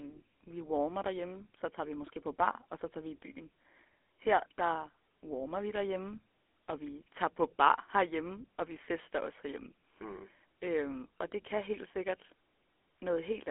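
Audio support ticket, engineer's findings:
GSM full-rate codec in the path, whole clip. It models the vocal tract and drives it with a sparse, regular pulse excitation. The sound fits 13 kbps full rate. Speech is plainly buzzy and gravelly, the band runs roughly 250 Hz to 3.5 kHz, and nothing is above 3.8 kHz.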